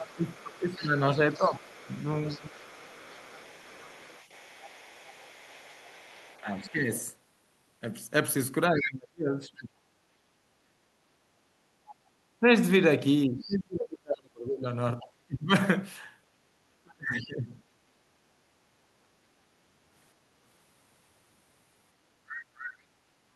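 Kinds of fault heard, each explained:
Speech suppressed in double talk: The talker's speech sinks in level and thins out in patches while the far side is playing on the loudspeaker, most likely because the echo canceller could not tell near speech from loudspeaker echo and attenuated both. This happens in the first 2.55 s with dips of roughly 15 dB, in parts of 6.41 to 17.54 s with dips reaching roughly 30 dB over about four seconds in total, and in a brief 40 ms notch at 23.23 to 23.27 s.
Other side's voice leaking through: A faint second voice sits under the talker from 0.1 to 11.95 s and again from 15.0 to 17.24 s, roughly 25 dB below the main speech. It returns more prominently, roughly 15 dB down, between 22.29 and 22.69 s. This is likely the far end playing on the device's loudspeaker and reaching the microphone, with the echo canceller leaving some of it behind.
Background gated by the echo canceller: Between 10.07 and 10.57 s the room tone drops out suddenly, falling by about 19 dB for a total of roughly a fifth of a second before it recovers. 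The echo canceller clamped the microphone down hard while the loudspeaker was active, which pulled the ambient floor away along with the echo, then released it. This leaves a brief hole in the background that the ear reads as a momentary gap.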